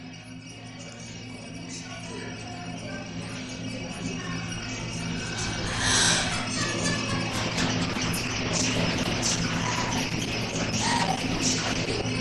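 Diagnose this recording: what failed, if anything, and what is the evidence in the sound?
Call bitrate drop, from 7.3 s to about 12.11 s. This is a call-processing and codec fault: the call's bandwidth estimate fell, so the encoder was told to spend far fewer bits on the audio. From 7.3 s the sound loses its upper frequencies and takes on the coarse, rough or watery texture of an Opus encoder starved of bits. The change fits a fall from 64 kbps to about 11 kbps, held for about 4.7 s, until about 12.11 s.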